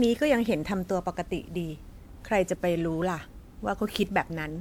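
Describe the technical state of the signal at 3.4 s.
At 3.4 s the speech carries generation loss, present across the whole clip. The likely cause is repeated decoding and re-encoding, around four passes, through a lossy codec whose character fits WMA at 128 kbit/s. Each pass re-quantises on a shifted frame grid, so the noise accumulates. The result is a swirly, hollow, smeared sound with blurred attacks. That is worse than one encode at that rate would give, even though the band still extends to 20.1 kHz.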